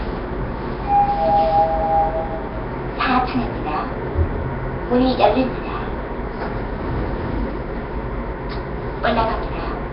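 A recording of everyday sounds, with Nellymoser compression damage running through the whole clip. Nothing reaches above 5.3 kHz, so the top end is dull. A rough, hissy haze sits around every sound. Quieter detail turns smeared and watery. The cause is likely the old Flash Nellymoser Asao codec at a low bitrate, around 22 kbps. With so few bits, weak bands go uncoded and are filled with noise. That noise is the grainy halo you hear.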